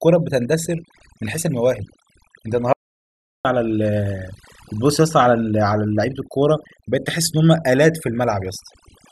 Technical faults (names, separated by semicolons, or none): overdone noise removal; audio dropout to silence